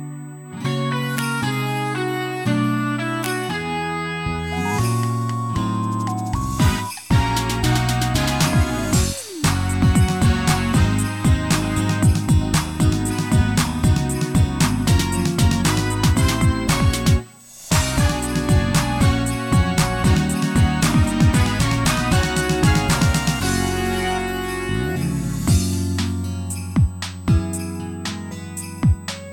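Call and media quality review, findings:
USB whine, whole clip: steady fixed-pitch tone at 8 kHz, sitting roughly 30 dB under the audio. Probable culprit is the USB interface's power or ground, with its 125 microsecond microframe current draw leaking into the analogue path.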